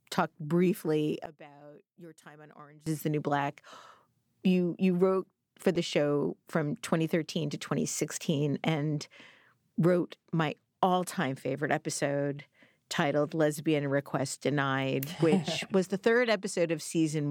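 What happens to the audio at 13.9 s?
Nothing goes wrong at 13.9 s; the speech carries on intact through that moment with no audible fault.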